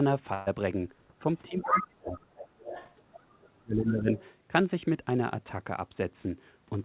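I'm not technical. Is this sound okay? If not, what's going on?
No. At 0.34 to 0.48 s there is a burst of packet loss: about an eighth of a second of the speech never arrived, so the receiver stretched the last sound into a brief held buzz or fading hiss, and then the speech jumps ahead with that piece missing.

At 1.47 to 1.85 s, 2.39 to 2.93 s, 3.12 to 3.22 s and 4.11 to 4.30 s, a second voice can be heard under the main one. This is the other side's voice leaking through, likely from the talker's loudspeaker getting back into the microphone. The first stretch is as loud as the main speech; the later ones are fainter. Unlike dropouts, this adds sound rather than removing it.

From 1.48 to 2.70 s and again from 3.45 to 4.11 s, the main voice dips sharply, turns dull or breaks into pieces. This is speech suppressed in double talk, likely because both sides were talking at once and the call's echo removal turned everything down. 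It differs from packet loss because there is no held buzz and nothing is skipped. The voice is simply pushed down while the other person speaks.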